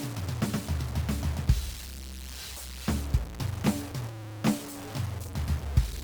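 It's a music clip with grainy, signal-following distortion all the way through, sitting only around 15 dB below the music. That points to low bit depth without dither, likely truncated to about 5 bits, so the rounding error tracks the signal instead of staying a steady noise.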